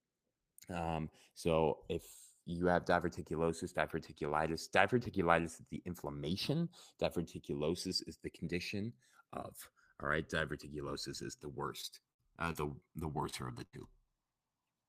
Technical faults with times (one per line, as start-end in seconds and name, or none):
0.00-14.88 channels drifting apart
11.81-12.84 repeated packet loss (robotic sound)
13.30-14.08 repeated packet loss (robotic sound)